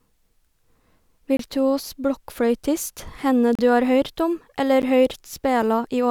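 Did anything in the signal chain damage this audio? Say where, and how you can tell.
Yes: three blocks of digital silence, at 1.37–1.39 s (23 ms), 3.55–3.59 s (35 ms) and 4.82 s (12 ms), point to buffer underruns at the driver stage, fitting 1024- and 512-sample buffers. The waveform drops abruptly to near-silence, and the spectrogram shows blank columns.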